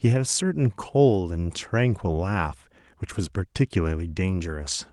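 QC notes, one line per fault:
Nothing stood out on listening to the speech.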